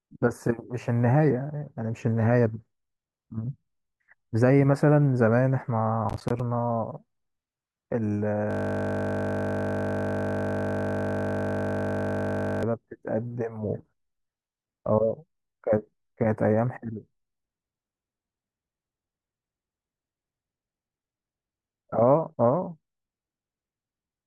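Processor overload crackle runs from 6.10 to 6.40 s. The processor missed a string of buffer deadlines, and each missed buffer dropped out as silence. The sound is a short burst of gritty crackle, with gap spacing that fits buffers of around 10 ms.

A system hang loop follows from 8.51 to 12.63 s. The system froze while the audio hardware kept replaying the same 20 ms of speech from its ring buffer, over and over for about four seconds. The result is a steady, mechanical buzz at 50 Hz.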